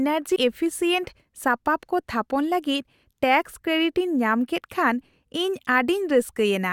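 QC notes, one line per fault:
0.35 s, compressed frames skipped: the speech jumps ahead about a tenth of a second, which fits several missing 23.2 ms frames.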